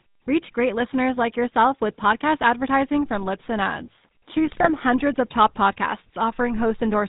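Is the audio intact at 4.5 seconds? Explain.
No. At 4.5 seconds you're inside a burst of GSM bit errors running from about 4.47 to 4.69 s. Corrupted bits are reaching the decoder, so the filter, pitch and gain values it rebuilds each frame come out wrong. The spectrum lurches and the level jumps from frame to frame, and the sound breaks into squawks, pops and gargling. The damage across that stretch fits a bit error rate of a few percent hitting roughly ten frames.

Underneath that, the whole clip carries the GSM full-rate codec, and its damage is plainly audible here too. The codec rebuilds the voice from a vocal-tract model driven by regularly spaced pulses and keeps only a thinned-out excitation, which gives the speech a buzzy, gravelly roughness. Nothing above 4 kHz gets through. That character fits the 13 kbps full-rate coder.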